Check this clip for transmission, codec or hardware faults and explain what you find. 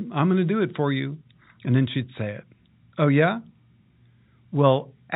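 No transmission, codec or hardware faults found; the speech carries ordinary G.711 telephone coding, with nothing above 4 kHz and only faint level-tracking quantisation noise.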